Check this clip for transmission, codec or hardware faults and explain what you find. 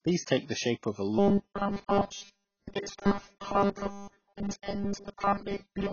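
Two faults are audible: codec damage across the whole clip, and a robotic buzz over most of it.

AAC compression runs throughout. Nothing is heard above 6.8 kHz. The damage is heavy. The likely cause is AAC-LC coding at a low bitrate, around 16 kbps. The encoder cut the top band and quantised the rest coarsely. The speech sounds dull and smeared.

Robotic sound from repeated short buffers starts at 1.19 s, right after "the shape of a", and lasts to the end. The likely cause is missing audio being replaced by repeats of the last piece. A 200 Hz buzz points to 5 ms pieces. Essentially all of this stretch is made of repeats, so it sounds like a rigid, metallic drone.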